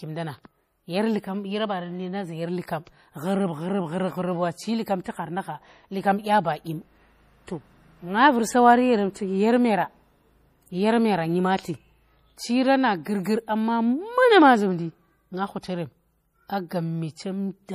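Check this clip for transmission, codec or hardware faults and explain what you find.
Two faults are audible: coding damage across the whole recording and one pre-echo on an attack.

MP3 compression: Throughout the clip there is nothing above 15.2 kHz, and the damage is plainly audible, with a watery, swirly texture and metallic chirps on s sounds. The likely cause is MP3 coding at a low rate, which fits roughly 40 kbps. Short of bits, the encoder cuts the treble at a fixed point and zeroes weak frequency lines, which then flicker on and off between frames.

Pre-echo: From 13.23 to 13.25 s, a hiss spreads about 21 ms ahead of a sharp attack, which sounds softened and smeared. The transform codec spreads its quantisation noise evenly across each block. Because this attack falls late in its block, noise scaled to the loud onset also fills the quiet moment before it, where nothing masks it.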